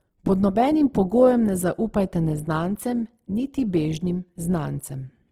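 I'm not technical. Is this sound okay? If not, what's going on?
No. The speech carries audible Opus compression damage from start to finish. The voice sounds grainy and rough, with a hiss woven into it, while still reaching up into the high frequencies. That texture is the likely sign of a file squeezed hard to save space: the encoder keeps the overall balance of each frequency region, but when detail runs short it fills the gaps with noise or copies of lower sounds.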